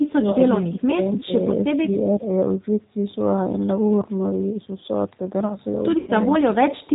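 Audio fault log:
throughout, G.729 codec: the whole clip carries plainly audible 8 kbit/s G.729 coding, which rebuilds the speech from a vocal tract filter, a pitch predictor and a handful of pulses per frame rather than sending the waveform itself. That's why everything sounds a bit rough and synthetic, and why there's nothing above 4 kHz, so the speech comes across muffled and phone-like, with sibilants dulled.
0.0 to 2.26 s, speech suppressed in double talk: there are three stretches where the speech sinks, at 0.0 to 0.39 s, 0.61 to 1.0 s and 1.25 to 2.26 s. The first dips hardest, around 20 dB at its deepest, and the later two around 10 dB. The likely cause is an echo canceller getting confused while the far end talked at the same time, so it couldn't tell this talker from loudspeaker echo and turned everything down, leaving the speech ducked and patchy.
1.15 to 1.24 s, echo leak: a brief faint ghost of the speech shows up here, a copy trailing about 300 ms behind and sitting roughly 20 dB under the main signal. 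It most likely comes from the far side playing the call on a loudspeaker while its echo canceller let a scrap of that pickup through and sent it back, so it's only a short fragment.
5.98 to 6.1 s, VoIP packet loss concealed by the speech codec: about 90 ms of audio went missing, which fits three lost packets. The decoder papered over the gap by carrying on from its last pitch and filter settings and fading them down, so the speech smears into a buzzy tone or coloured noise that weakens. Because each frame builds on the one before, the speech stays weak or distorted for a moment after real packets return.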